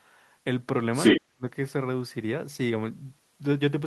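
Between 0.92 and 1.2 s, the echo canceller likely failed to remove the far end's loudspeaker playback from the microphone signal. The result is the other side's voice leaking through, a second talker sitting roughly 10 dB above the near-end speech for that short stretch.

From 1.16 to 1.44 s, with both sides talking at once, the canceller likely mistook the near-end talker for echo and attenuated everything. This is speech suppressed in double talk: the voice plunges, at its deepest by something like 40 dB, and is gutted for about a third of a second.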